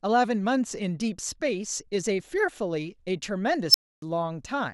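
At 3.69 s an unstable filter runs away: a tone around 5 kHz swells to clipping within about 48 ms, then the output drops to silence for 280 ms until 4.02 s.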